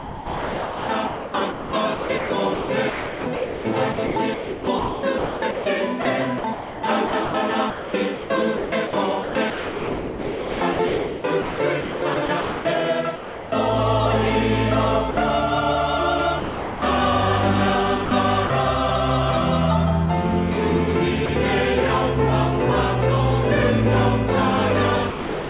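Sound chopped by the voice detector runs from 0.0 to 12.65 s and again from 18.05 to 18.5 s. The audio keeps cutting in and out. About 7 s of the first stretch and 90 ms of the second are replaced by comfort noise. This is likely the sender's voice detector switching on and off, treating quieter parts of the sound as background. Sound dropped by the voice detector occurs at 13.16–13.52 s (360 ms), 15.11–15.17 s (60 ms), 16.4–16.82 s (420 ms), 21.26–21.29 s (30 ms) and from 25.1 s to the end (400 ms). Each time the sound gives way to steady noise or near silence. The likely cause is the detector mistaking quiet sound for background, which halts transmission and leaves the receiver to fill the gap with comfort noise. All of it comes through a narrowband G.711 call path, with nothing above 4 kHz.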